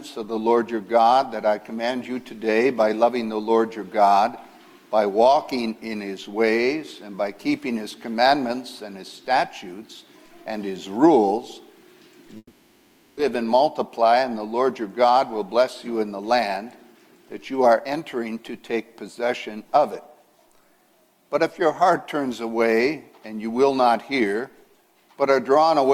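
At 12.37 s the audio breaks off and, for about 0.8 s until 13.19 s, the last sound is stretched into a decaying buzz before a brief silence of roughly 40 ms; the sound then resumes with that stretch gone. This is a long network dropout, likely a run of lost packets the receiver papered over. Unlike a short packet-loss click or stutter, the fill lasts long enough to audibly fade, and nothing lost is replayed.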